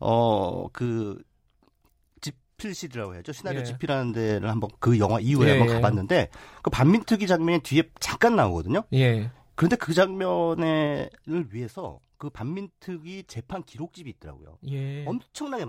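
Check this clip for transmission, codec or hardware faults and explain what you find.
Two kinds of fault are audible in this speech clip: zipper noise on three level changes, and a pitch-and-speed jump near the end.

Zipper noise occurs from 0.6 to 1.26 s (level falling by about 10 dB), from 3.58 to 4.36 s (rising by about 10 dB) and from 10.78 to 11.56 s (falling by about 15 dB). Each move goes in hard 3 dB jumps, roughly five a second, with no interpolation between them. Every jump puts a tiny discontinuity in the waveform, so the fades carry a gritty ticking rather than gliding.

A drift correction step begins at 13.86 s and lasts to the end of the clip. Playback suddenly runs 5.28% fast, raising the pitch by 89 cents, just under a semitone, and it stays there. This is likely a clock-matching routine that changed the resampling rate in one jump to rebalance its buffer instead of easing it over time. 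The speech abruptly sounds higher and hurried.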